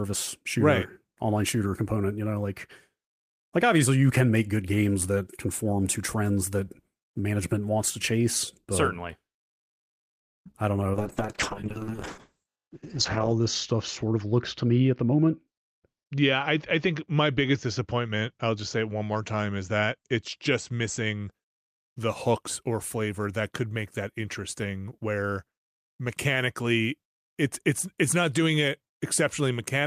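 A speech recording with four kinds of fault clustered around the middle. At 10.19 to 10.41 s, just before "I don't know", there is a call audio freeze: the sound stops for about 0.19 s and then resumes exactly where it left off. The likely cause is delayed packets draining the jitter buffer. Unlike packet loss, nothing is missing; the gap is inserted and the call runs 0.19 s later afterward. Right after, at 10.45 to 10.47 s and 10.51 to 10.56 s, come two short concealed packet losses. Each drops about 20 ms of audio, patched by extending the preceding sound, and heard as a brief smear or wobble rather than a clean pause. From 10.94 s, after "I don't know", to 21.38 s, before "the hooks or flavor", a call bitrate drop takes the encoder from 32 to 7 kbps, holding the lowest rate for about 2.4 s. Bandwidth narrows from 20 kHz to 8 kHz, so the voice turns muffled and rough instead of breaking up. 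Within that stretch, at 13.73 to 15.48 s, a jitter buffer speed-up trims about 0.15 s in small pitch-period pieces. Speech runs at 109% speed with unchanged pitch, sounding hurried rather than raised.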